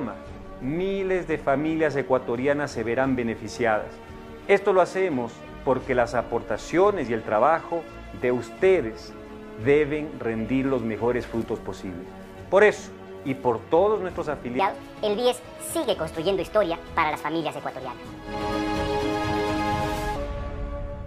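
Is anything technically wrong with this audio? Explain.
Yes. From 14.59 s to 20.16 s, the sound turns abruptly high and hurried, running 1.46 times faster than the surrounding material, with its pitch lifted by roughly seven semitones. This is a section at the wrong speed, likely caused by that stretch being played or rendered against the wrong clock rate. Because speed and pitch move together, everything in those five and a half seconds sounds squeezed and chipmunk-like until normal playback returns.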